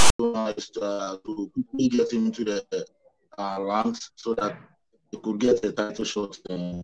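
File tags played as audio occupy the opening 0.0 to 0.19 s: a block of text tags and the zero padding after it were decoded as if they were samples. The text bytes come out as a loud, harsh rasp pushed to one side of the waveform's centre, and the padding then reads as dead silence before the real audio begins. The effect is an abrupt burst of static with hard edges.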